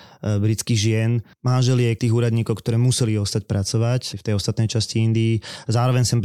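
Nothing in the speech stood out as a technical fault on listening.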